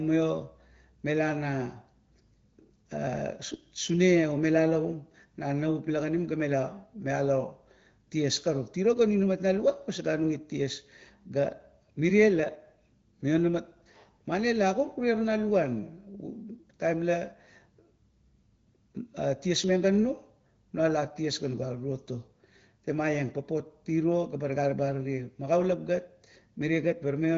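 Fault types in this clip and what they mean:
Nothing in this clip stood out on listening.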